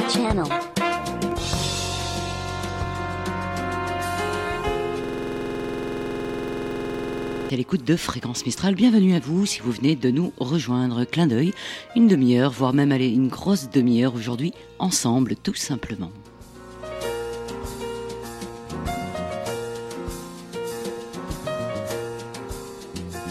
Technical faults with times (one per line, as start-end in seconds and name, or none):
5.04-7.50 system hang loop